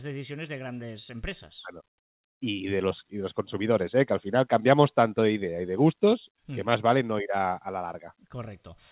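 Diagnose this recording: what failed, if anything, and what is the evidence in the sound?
Nothing failed: the speech carries only the ordinary signature of a narrowband call path, with no content above 4 kHz, which fits G.711 mu-law coding at 64 kbps.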